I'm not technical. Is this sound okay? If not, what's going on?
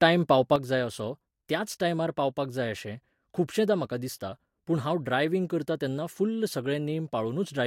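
No. At 0.56 s the speech suddenly gets quieter and stays that way to the end. The likely cause is one channel drops out.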